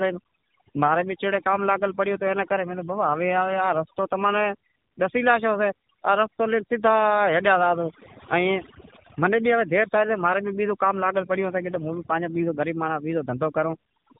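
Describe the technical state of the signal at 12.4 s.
At 12.4 s the link delivers AMR frames with flipped low-priority bits, AMR bit errors from 12.34 to 12.52 s, which fits a bit error rate of a few percent; misplaced excitation pulses make the voice hoarse, scratchy and gargly while keeping its pitch and level. Underneath, the AMR narrowband mobile codec, at what sounds like a low mode around 7.4 kbps, removes everything above 4 kHz, leaving the voice band-limited and plainly buzzy. Overdone noise removal has cut spectral bands near the noise estimate, so the background drops and breaks up into twinkling specks.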